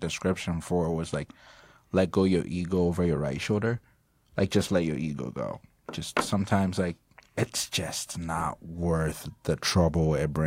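No faults can be heard in this speech recording, with no dropouts, glitches, clipping or other signal problems anywhere.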